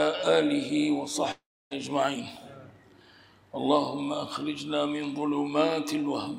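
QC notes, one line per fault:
1.31–1.73 s, long network dropout: incoming audio likely stopped arriving for about 0.4 s, leaving the receiver nothing to play. It stretches the last sound it had into a buzzy, fading tail, which thins out and leaves roughly 0.29 s of near-silence. Playback then picks up further along, so about 0.4 s of material is skipped outright rather than delayed, and the sound jumps forward when it returns.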